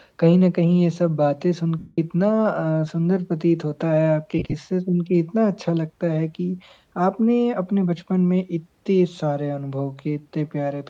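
At 1.79 s there's a run of lost LE Audio frames lasting until about 1.98 s, roughly 190 ms of missing audio, which fits about 25 frames at 7.5 ms each. The LC3 decoder covers the gap by replaying the last spectrum with randomised signs, so tonal sound smears into noise and then fades out as the concealment decays. A second patch from 4.39 to 4.54 s is scattered rather than solid, about 98 ms lost across 150 ms with no run much longer than 30 ms, so you get brief noisy flickers instead of a fade. The light codec damage underneath is just the ordinary lossy compression.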